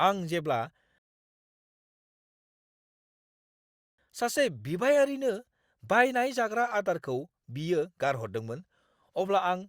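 At 0.98 s the speech halts in a rebuffering stall: playback ran dry of downloaded audio and waited about three seconds, resuming at 3.98 s exactly where it stopped. Nothing is skipped. The waveform shows a flat gap, and the spectrogram shows a blank vertical band.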